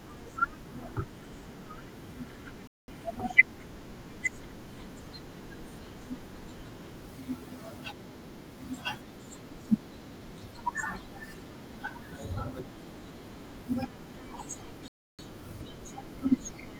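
At 2.67 s the speech halts in a rebuffering stall. The player has run out of downloaded audio. Silence holds for about 0.21 s, then resumes exactly where it stopped. A second stall at 14.88 s adds about 0.31 s. Nothing is lost.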